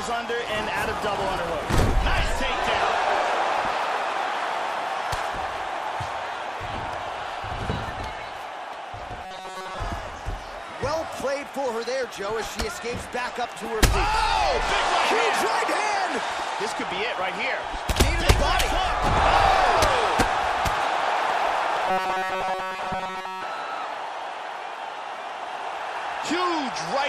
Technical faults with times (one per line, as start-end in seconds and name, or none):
9.25-9.78 robotic sound from repeated short buffers
21.86-23.43 robotic sound from repeated short buffers